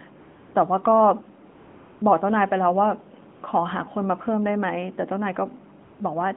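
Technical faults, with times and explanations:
0.20–0.54 s, 1.50–2.02 s, 3.34–3.42 s and 5.84–6.00 s, AMR comfort noise: in each pause, lasting 340 ms, 520 ms, 80 ms and 160 ms, the real background gives way to a smooth, steady hiss that switches in and out at the edges. The sending phone judged the talker silent and stopped transmitting speech frames, so the receiver filled each gap with synthetic noise built from a rough estimate of level and spectrum, band-limited like the rest of the 150 Hz to 3.5 kHz narrowband line.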